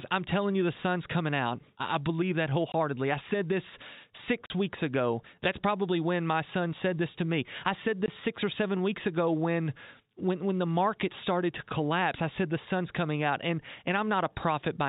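Three short dropouts cut the speech to dead silence: 2.72 to 2.74 s, 4.46 to 4.50 s, and 8.06 to 8.08 s. This is packet loss filled with silence. Audio packets never arrived, and the receiver inserted silence in their place. The holes are 20 ms, 40 ms and 20 ms long, which fits a 20 ms packet with one packet missing in two cases and two in a row at 4.46 s. The holes have abrupt edges and sit against the narrow band of the G.711 telephone coding.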